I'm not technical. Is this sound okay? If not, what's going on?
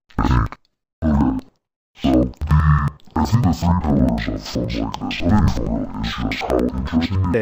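No, it isn't. From start to finish, this speech sounds an octave lower than it should, a bit doubled, and choppy, flickering about 11 times a second. That's the signature of interleaved audio read as planar. The left and right channels arrive mixed together in chunks of about 93 ms, which fits a 4096-sample block. The player wrongly splits each chunk in half and plays both halves at half speed. The pacing stays normal, but the pitch drops and every chunk seam is audible.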